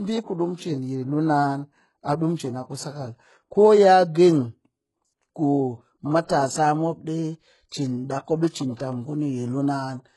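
HE-AAC compression, throughout: the speech is heavily degraded and nothing remains above 11.5 kHz. The sound likely passed through HE-AAC at a very low bitrate, around 12 kbps, where only the lower spectrum is coded and the treble is copied up from below, so s sounds turn gritty and metallic.

Pre-echo, at 8.49 to 8.54 s (43 ms) and 8.75 to 8.78 s (31 ms): a short hiss runs just ahead of two sharp onsets. The codec spread noise meant for the louder attack across its whole block, filling the quiet moment before it and softening each attack.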